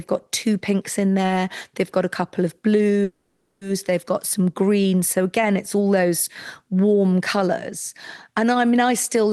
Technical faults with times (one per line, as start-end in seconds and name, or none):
3.03-3.63 call audio freeze